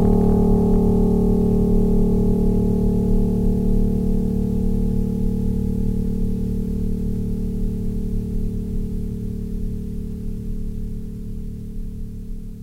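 Hard clipping runs from 0.03 to 1.03 s in this music, where the signal overdrives a stage by about 2 dB, so peaks are sliced flat. Those squared tops add high harmonics, heard as crackle on the loudest moments rather than constant fuzz.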